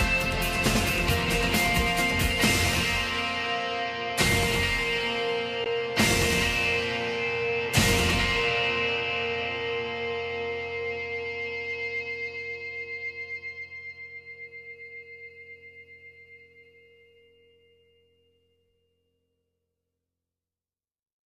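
At 5.64 s, a 16 ms block of digital silence: the sound drops abruptly to silence and returns, a hard-edged break pointing to an output buffer not filled in time.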